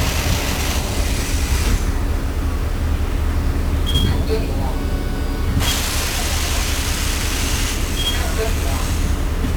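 Everyday sound, degraded for its entire length by 1-bit DFPWM compression. Each sample is coded as a single up-or-down step on an adaptive level, leaving heavy broadband quantisation noise. The result is fuzzy and crackly, and the treble is dulled or replaced by hiss, which fits a stream of about 48 kbps.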